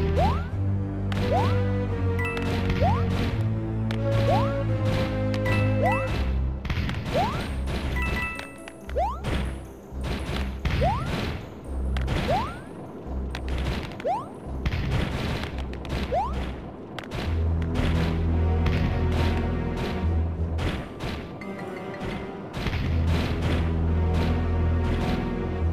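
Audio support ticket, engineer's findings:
CD scratch ticks, 2.51–3.64 s: six short ticks, about five a second, each a few ms at most. Probable component is the disc or transport. A scratch or blemish wipes out more data than error correction can rebuild, once per revolution, so the player patches over or mutes those samples and you get a tick every turn.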